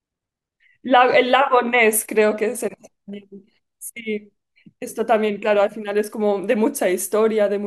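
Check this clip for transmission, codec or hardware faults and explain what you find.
Nothing in the speech points to a fault anywhere along the chain. There is nothing to report for any part of the recording.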